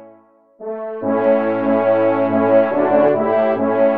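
From 1.25 s to 3.09 s, a doubled audio track appears. A second copy trails by roughly 0.7 s, several decibels quieter, starting and stopping abruptly. Likely a delayed second capture path.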